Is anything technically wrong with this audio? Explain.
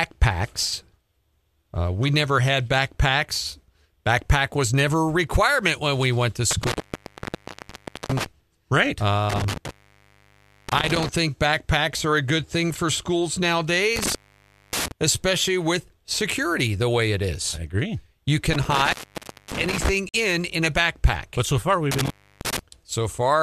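Yes, there are two problems. The bigger one is an intermittent contact, hitting five times: 6.51–8.26 s, 9.30–11.09 s, 13.96–14.92 s, 18.53–19.89 s and 21.92–22.59 s. A loose plug or cable is briefly losing connection, so the speech drops out for roughly 1.38 s, 0.98 s, 0.58 s, 0.59 s and 0.31 s, with crackle as the contact breaks and remakes and just faint hiss in the gap.

There's also a short digital broadcast dropout at 20.09–20.14 s. The receiver muted for about 48 ms after bad or missing data, which fits two lost frames, so you get a quick clean hole in the speech, and whatever was in it is gone.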